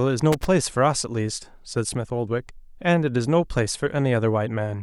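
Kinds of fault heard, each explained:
Loose connector crackle: Right near the start of the speech, from about 0.32 to 0.46 s, there's a short, ragged burst of crackle lasting roughly 130 ms. That's what you get when a worn or grubby contact in a cable or jack shifts slightly and keeps losing and regaining its connection. The signal gets chopped on and off in quick, uneven bursts, so it comes across as a scratchy rattle, not a clean click.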